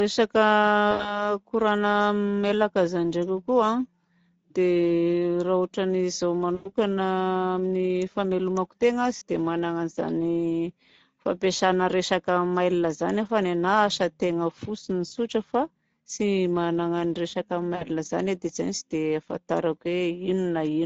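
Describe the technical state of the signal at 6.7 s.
At 6.7 s the decoder is near the end of a gap from 6.55 to 6.72 s in which VoIP packets were lost and the loss was concealed by the speech codec. The missing stretch of about 100 ms fits roughly five 20 ms frames. The decoder fills it by extrapolating its last pitch and filter while lowering the gain, so the speech smears into a fading buzzy, coloured tone. Because each frame builds on the previous one, the voice stays weakened and distorted for a short while after 6.72 s.

Underneath, the whole clip runs through the Speex codec at a rate that fits a 16.8 kbps mode. Too few bits are left to code the excitation, so the speech at this moment, as everywhere, has a plainly audible noisy, hoarse roughness.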